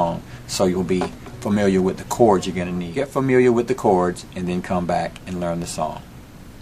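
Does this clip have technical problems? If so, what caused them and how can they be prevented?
No, there are no technical faults.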